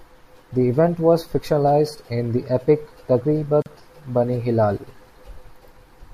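At 3.62 s the speech drops into a silence of about 40 ms, ending at 3.66 s: a gap at a join of encoded pieces. Two separately encoded segments were butted together untrimmed, so encoder delay and end padding remain, giving smeared edges before speech resumes where it stopped.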